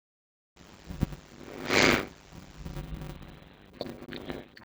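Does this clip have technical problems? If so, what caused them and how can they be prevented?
Yes. A block size mismatch (padded) runs throughout: each block is only partly filled with sound, and the rest is zeros. The result is a steady 100 Hz buzz, and the speech plays at 0.533 times normal speed with its pitch about unchanged. This fits 256-sample writes going into 480-sample reads. It can be prevented by setting the same block size on both stages, or by buffering the writes so that every read gets a full block.

An adaptive stream at a lower bitrate takes over from 2.76 s to the end. Codec artefacts increase. The quality changes suddenly with no gap, which points to a switch from about 96 kbit/s to 16 kbit/s AAC-LC after the connection slowed. It can be prevented with a larger playback buffer or a higher minimum bitrate, so a short slowdown does not force the lowest rendition.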